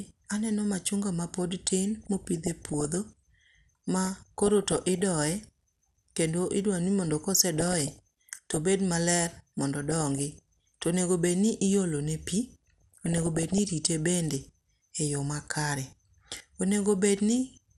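Speech runs dull and plainly granular from start to finish, the top end thinned and a gurgle running through it. That is MP2 compression, likely from an MPEG Layer II encoder at a rate that points to around 80 kbps, with too few bits to keep every upper sub-band alive, so some drop out and the rest are coarsely quantised. On top of this come five bursts of DAB burbling, at 2.03–2.94 s, 4.05–5.01 s, 7.57–8.57 s (right after "idwaro ni mondo ka"), 9.91–10.83 s and 12.78–13.61 s, each about a second of burbling. Here bit errors from weak reception have slipped past error correction into the MP2 data, corrupting samples, which put short blips of noise into single sub-bands, and scale factors, which make sub-bands jump in level for up to a frame. The third burst is the harshest, fitting a higher error rate. What separates the two faults is timing: the compression dullness never lets up, while the burbling comes in short, isolated episodes.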